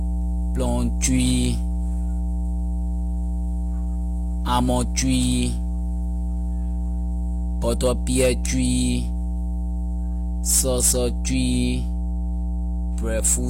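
Speech, with mains hum running through the whole recording. A steady 60 Hz tone sits roughly as loud as the voice. A ground loop or nearby transformer is coupling the power line in.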